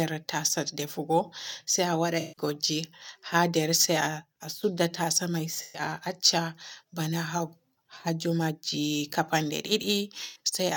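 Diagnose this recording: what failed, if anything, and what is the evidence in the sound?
AAC frame loss with concealment at 2.20 to 2.42 s, 5.61 to 5.82 s (just after "tasa me") and 10.24 to 10.39 s. Each is a brief smeared, noisy patch in the speech where detail dissolves and comes back. The gaps of about 149, 128 and 107 ms fit runs of roughly seven, six and five AAC frames lost. The decoder covered each run by extending the last good spectrum with scrambled signs or interpolated energy.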